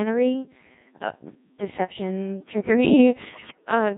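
The whole clip has gone through the Codec 2 vocoder, and heavily so. The speech is rebuilt from pitch, voicing, energy and a rough spectral envelope rather than the real waveform, so it comes out robotic and buzzy throughout, with that synthetic sine-wave character. The thinness of the detail suggests something around 1.6 kbit/s, well within the 0.7 to 3.2 kbit/s range this codec covers.

From 3.25 to 3.71 s you get bit errors on digital voice radio. It's the classic fringe-of-coverage sound. With something like one bit in ten flipping, and each bit steering a whole frame's pitch, level or tone, the synthesis goes wild for about half a second. It jumps in pitch and loudness, swings in colour, and dissolves into warbles, bleeps and robotic gibberish before settling again.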